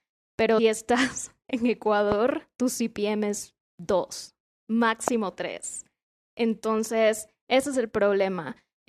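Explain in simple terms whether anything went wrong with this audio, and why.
At 0.58 s the speech jumps forward. This is compressed frames skipped. Compressed audio is stored in small blocks called frames, here about 21 ms each. Several of them were never played, either because they were missing from the file or because the player rejected them as damaged. About a seventh of a second of speech is lost. The two sides of the gap are joined directly, so you hear a small glitch where the sound suddenly jumps ahead.

Two loud pops sit on top of the speech. The first is at 2.12 to 2.14 s and the second at 5.08 to 5.10 s. Each is a single sharp pop, clearly louder than the speech, and the talking carries on underneath without a break. A pop like this is a sudden jolt of electricity added to the signal. It most likely came from a plug, a switch, static or a glitch in the audio hardware or its software.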